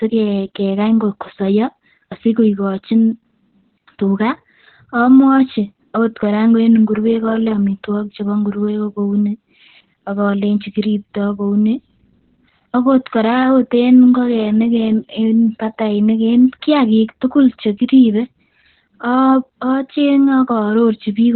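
Throughout, Opus voice compression at a low rate narrows the speech to nothing above 4.2 kHz, with coarse linear-prediction coding, leaving it muffled, hoarse and slightly robotic; this fits roughly 8 kbps.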